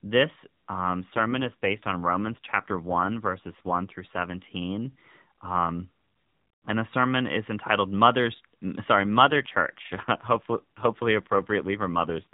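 Speech carried over an AMR narrowband mobile codec, with nothing above 4 kHz. Two AMR rate drops occur, from 1.00 to 4.53 s and from 8.98 s to the end. The voice turns rougher and buzzier, with no gap. This fits the codec stepping down from 12.2 to 5.9 kbps.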